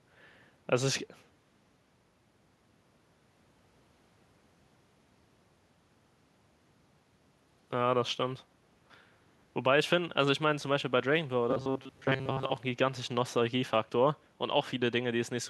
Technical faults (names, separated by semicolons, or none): robotic sound from repeated short buffers